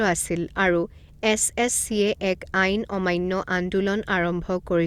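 No technical faults are audible.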